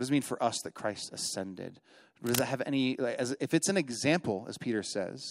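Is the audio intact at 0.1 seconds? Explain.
Yes, the speech at 0.1 seconds plays through cleanly, with no dropout, click, distortion or other fault at that moment.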